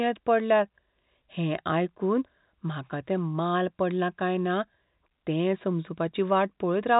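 No technical faults detected.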